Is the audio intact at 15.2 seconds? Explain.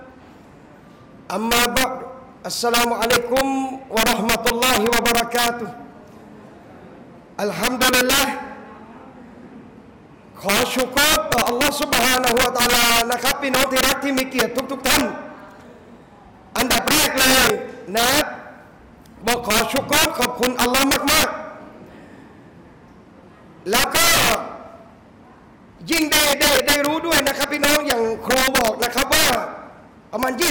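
No. Integer overflow runs throughout, including 15.2 s: about 10 dB of overdrive wraps the roughly 4% of samples over the limit to the opposite sign, giving violent cracks. The waveform shows sudden sign flips; the spectrogram shows vertical broadband streaks.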